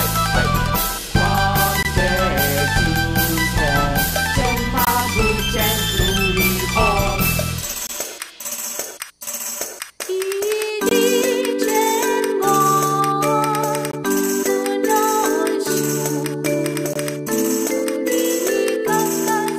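The audio has a gap between chunks every 3 s: silences of about 21 ms at 1.83–1.85, 4.85–4.87, 7.87–7.89, 10.89–10.91, 13.91–13.93 and 16.93–16.96 s. Each chunk plays complete, but silence sits at every join, which fits codec padding added to each chunk.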